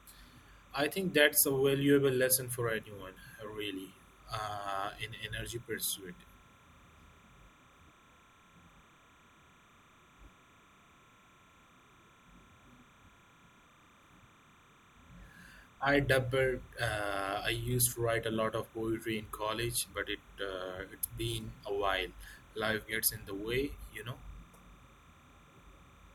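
Timecode bleed runs through the whole speech clip. Linear timecode at 30 frames per second has leaked in from a neighbouring track or cable. Its square wave flips between tones near 1 and 2 kHz. A steady chirping warble sits roughly 30 dB under the speech.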